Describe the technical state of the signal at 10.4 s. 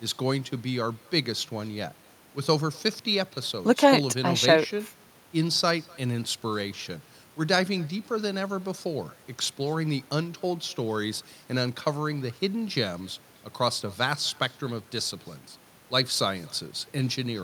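At 10.4 s, as throughout the clip, there is echo with no canceller: the far end's loudspeaker feeds its microphone and nothing strips it out, so the speech returns roughly a third of a second later as a faint, thin shadow about 28 dB down.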